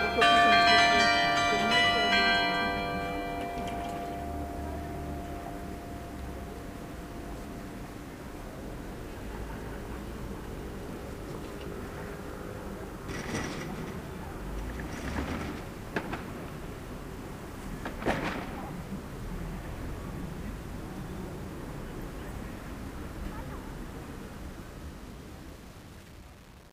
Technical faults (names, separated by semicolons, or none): low bit depth without dither